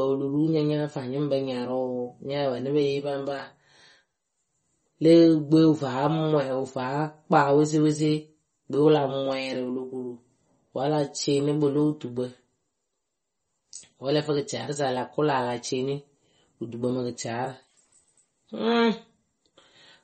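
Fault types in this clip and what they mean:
MP3 compression: Throughout the speech the treble stops dead at about 8.4 kHz, leaving it dull, and the damage is plainly audible as a watery, unstable texture. This is likely low-bitrate MP3 encoding, consistent with roughly 32 kbps. Starved of bits, the encoder discards everything above a fixed cutoff and zeroes weaker frequency lines, which flicker on and off between frames and leave the sound thin and smeared.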